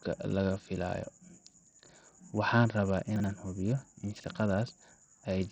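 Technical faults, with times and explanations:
Throughout: Bluetooth SBC compression is the likely cause of the heavy, even damage to this speech. The treble is thin and flickers in and out, and a gritty, grainy noise with aliasing rides on every syllable. This is what a small bit pool does. The upper sub-bands get few or no bits and the rest are coarsely quantised, and the degree of damage fits a low rate of around 64 kbps.
3.16–3.24 s and 4.16–4.24 s: chunks out of order. Both moments sound jumbled, one just before "aan hubiyo in" and the other just after it. In each, a segment of about 40 ms plays one slot late, after the segment that should follow it. No audio is missing, but the swapped order leaves hard joins where the waveform jumps, and those produce the brief garbled stumble.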